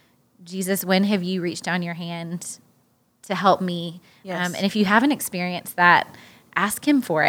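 No faults are audible anywhere in this speech recording.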